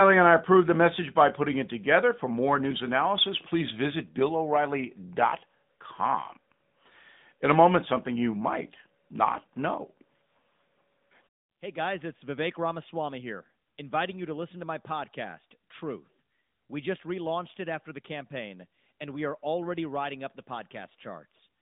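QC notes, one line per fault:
Throughout, AMR narrowband mobile codec: the speech has that classic phone-call sound, squeezed into a band of about 150 Hz to 3.7 kHz with nothing above 3.8 kHz. The damage is plainly audible, a buzzy, synthetic edge to the voice, because the codec rebuilds each short frame from a vocal-tract model fed by a handful of pulses rather than the real waveform. That level of roughness fits a mid-rate mode, somewhere around 10 kbps.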